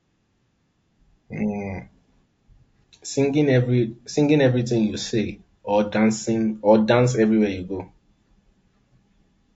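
From start to finish the speech carries plainly audible coding damage, most likely low-delay AAC compression of the AAC-ELD kind used for video calls. Its short frames of about 500 frequency lines keep the delay low, and at this low bitrate the voice sounds rough and grainy, with noise filling the gaps between harmonics and a dulled, somewhat synthetic top band. The degree of damage fits a bitrate around 32 kbps.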